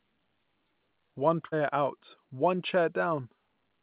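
At 1.46–1.54 s, a burst of packet loss: the last sound is held and faded, then speech resumes at "out one" with 60 ms lost.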